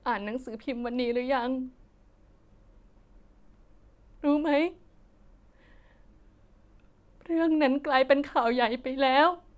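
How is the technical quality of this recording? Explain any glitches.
The recording has no technical glitches to explain. Nothing in the speech calls for a technical comment.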